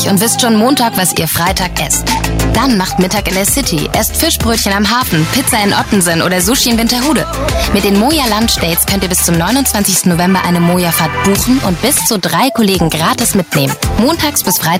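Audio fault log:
Throughout, gain pumping: the level ducks by roughly 5 dB under each loud sound, so the level keeps breathing and everything feels squashed. Likely the input gain is far too hot and a fast limiter keeps clamping down.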